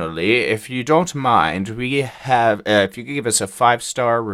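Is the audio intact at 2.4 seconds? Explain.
Yes, at 2.4 seconds the speech plays through cleanly, with no dropout, glitch or other fault at that moment.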